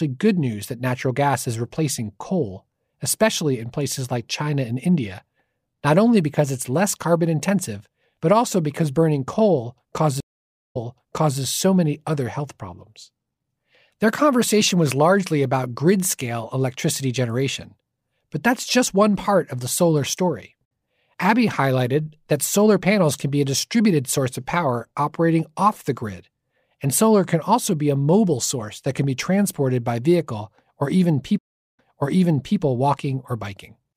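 Stream reconnects occur at 10.2–11.4 s and 31.39–32.59 s. Each time, the connection dropped, the player fell silent, reconnected and started a fresh decoder partway through the stream, with the server resending recent audio. After "also because burning coal" comes 0.55 s of silence, then playback resumes 0.65 s earlier before "so many other health". After "by vehicle or even" the gap is 0.40 s and the audio jumps back 0.81 s, repeating material just heard.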